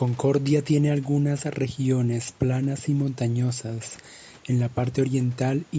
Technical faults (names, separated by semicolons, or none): none